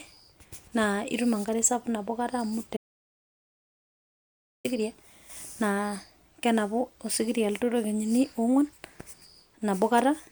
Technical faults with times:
2.77-4.65 audio dropout to silence

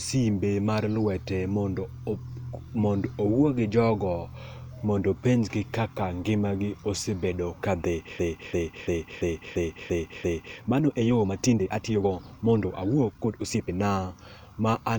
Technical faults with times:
7.80-13.73 time-stretched section
8.19-10.58 system hang loop

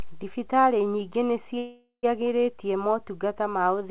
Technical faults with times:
1.58-2.05 call audio freeze

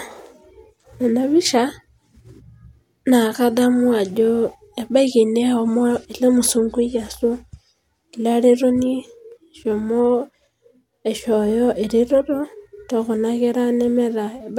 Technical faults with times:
none

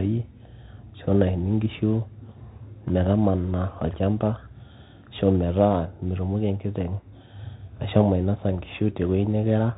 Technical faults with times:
0.00-9.77 Bluetooth CVSD headset codec

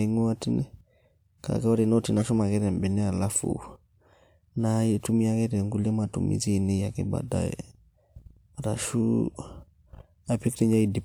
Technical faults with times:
2.20-2.29 corrupt frame decoded

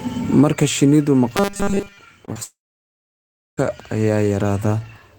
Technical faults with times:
1.37-1.98 robotic sound from repeated short buffers
2.25-2.37 short concealed packet loss
2.43-3.59 long network dropout

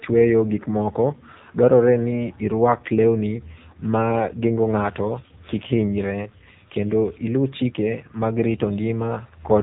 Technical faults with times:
0.00-9.62 AMR narrowband mobile codec

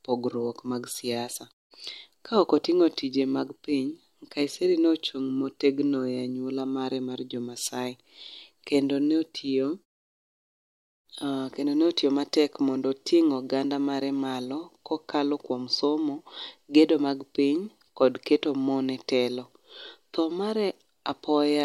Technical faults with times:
none

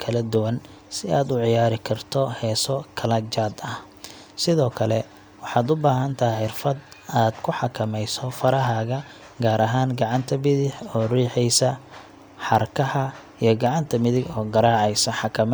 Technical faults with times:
0.35-15.33 clock drift buffer slips

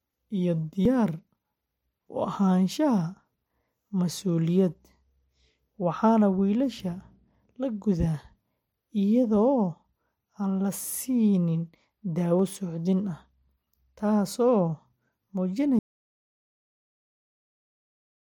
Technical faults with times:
0.85 dropped buffer (overrun)
12.39 dropped buffer (overrun)
15.79-18.27 audio dropout to silence

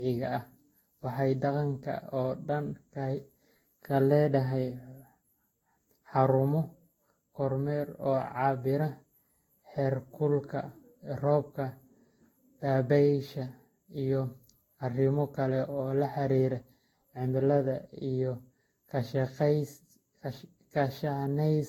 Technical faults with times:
0.00-21.69 generation loss

